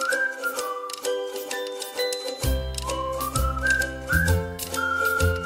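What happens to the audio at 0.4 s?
Nothing goes wrong at 0.4 s; the audio runs on intact through that moment, with no dropout, click or distortion to be heard.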